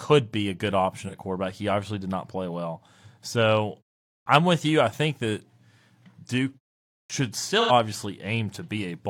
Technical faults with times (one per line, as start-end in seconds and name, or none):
1.01-1.14 AAC frame loss with concealment
4.21-4.26 clipped start after a pause
7.04-7.10 clipped start after a pause
7.60-7.71 AAC frame loss with concealment